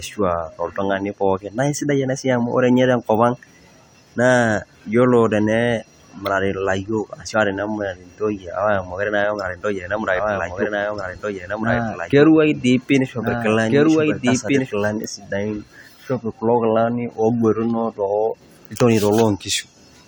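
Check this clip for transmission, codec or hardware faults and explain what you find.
One fault is present. From 9.97 to 14.71 s, after "naa apa emurati ntoyie", a doubled audio track appears. A dry, full-band copy trails roughly one and a half seconds behind, about 5 dB quieter, and cuts in and out abruptly. It is likely a second, slower capture path mixed in.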